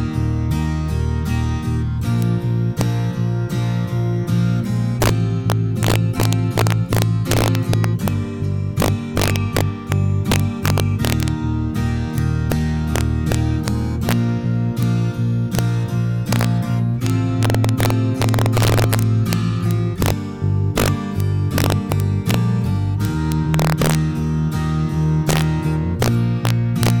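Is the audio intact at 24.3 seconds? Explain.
No. Integer overflow runs through the whole clip, including 24.3 s: the signal is driven about 4 dB past the integer limit, and a small fraction of samples wrap to the opposite sign instead of being limited, producing sharp, violent cracks on loud moments, harsher than clipping.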